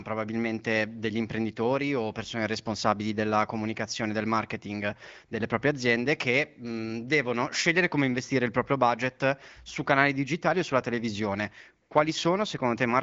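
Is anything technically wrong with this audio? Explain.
No, nothing here is faulty: the speech carries the band-limited character of an AMR wideband (HD Voice) codec link, with nothing above 7.5 kHz and only light coding texture, consistent with a mid-to-upper rate around 15.85 kbit/s.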